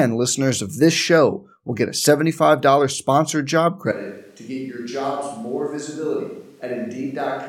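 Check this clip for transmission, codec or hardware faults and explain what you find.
One fault: a switch to a distant microphone from 3.92 s, just after "sponsored job", lasting to the end. The close microphone's feed likely dropped out, leaving a far-off pickup. The speech turns suddenly roomy and hollow, thinner in the bass, roughly 10 dB quieter, with room noise rising to around 35 dB below the speech.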